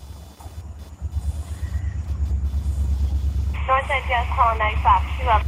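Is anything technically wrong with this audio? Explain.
Yes, two things. Running under the whole clip is computer activity noise, a buzzy chirping at roughly 500 pulses a second, sitting maybe 30 dB below the sound. That comes from the processor, graphics card or mouse pulling current and shifting the ground the audio circuit shares with them, so the buzz tracks what the machine is doing rather than anything in the audio itself. It's faint, and it jumps up and drops back with the computer's activity.

Then from 1.66 s to 3.61 s there's a call bitrate drop. The connection's bandwidth estimate dipped, and the encoder got pushed down from 32 kbps to 18 kbps, staying at the bottom for about 1.9 s. With fewer bits to spend, Opus codes everything more coarsely and trims the top end, so that section goes rough and watery and a bit muffled. It clears up once the rate recovers.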